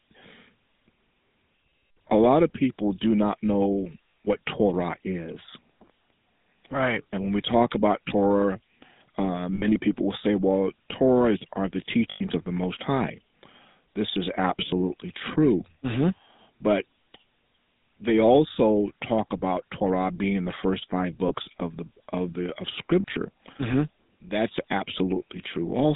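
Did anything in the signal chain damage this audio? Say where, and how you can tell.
Yes. Throughout the clip the speech has a buzzy, gravelly roughness and sits in a narrow band of roughly 200 Hz to 3.7 kHz. That points to the codec stage: the GSM full-rate codec at 13 kbps models the vocal tract and drives it with coarse, regularly spaced pulses, so it discards fine detail and all highs.

Four short stretches turn into a held, rough, metallic ring: 9.54 to 9.66 s, just before "people will say well"; 12.10 to 12.23 s, between "is are the" and "of the"; 21.28 to 21.32 s; and 23.00 to 23.04 s, right after "the of the of". These are lost GSM frames on the network. The decoder fills each 20 to 100 ms gap by repeating the settings of the last good frame.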